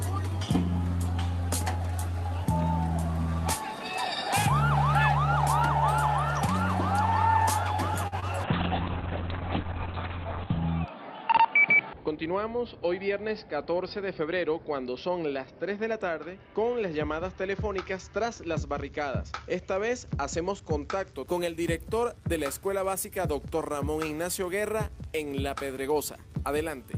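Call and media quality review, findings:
Held, slightly buzzy sound at 8.07–8.14 s, about 45 ms stretched, nothing lost afterwards. Short stall from a late packet: jitter buffer ran dry, receiver extended the last audio until the packet arrived, then resumed in place, adding 45 ms delay.

Brief smear at 8.20–8.24 s, roughly 20 ms of real audio gone. Short concealed packet loss: packet missed the decoder deadline, so the receiver synthesised a continuation of the preceding sound and crossfaded back into the decoded stream.

Audio turns rough and muffled from 8.46 s to 21.20 s, with top end limited to 4 kHz instead of 20 kHz. Call bitrate drop: bandwidth estimate fell, encoder pushed from 40 to 6 kbps, floor held for about 2.2 s.

Hurried passage at 11.99–12.31 s, pitch unchanged, running at 111% speed. Jitter buffer speed-up: buffer overfilled, so the receiver trimmed pitch-period-sized slices repeatedly, around 40 ms in total, to pull the delay back down.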